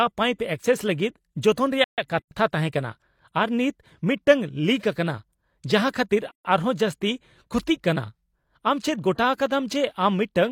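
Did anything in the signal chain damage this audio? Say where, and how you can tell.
Yes. Playback: speech halts from 1.84 to 1.98 s, about 135 ms, then resumes where it left off. This playback stall is likely a starved or blocked player.

Codec stage: gaps at a join of encoded pieces open at 2.19–2.31 s and 6.31–6.45 s, about 4 s apart, unlike the stall. The silence is untrimmed encoder delay and padding.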